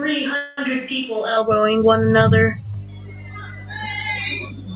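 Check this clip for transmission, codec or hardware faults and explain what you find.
Three faults stand out, all heard through a narrowband call path that stops at 4 kHz, which fits G.711 mu-law at 64 kbps.

From the very start until 1.37 s the speech sounds roomy and hollow, thin in the bass, roughly 10 dB quieter than the rest, with room noise sitting about 30 dB below it. That's most likely a switch to a distant microphone: the close mic's feed dropped out and a far-off mic carried the sound instead. At 1.37 s the sound snaps back to the close mic.

Inside that stretch, from 0.36 to 0.59 s, there's a call audio freeze. The last bit of sound gets stretched into a fading buzzy tail for about 214 ms, then the speech picks up exactly where it left off with nothing lost, just pushed later. That's likely packets arriving late so the jitter buffer ran dry and the receiver filled the wait itself.

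From 2.74 s to the end there's mains hum, a steady 50 Hz tone with some low harmonics, about 20 dB under the signal. That's the power line leaking in through a ground loop or a nearby transformer, and it sits under everything right to the end.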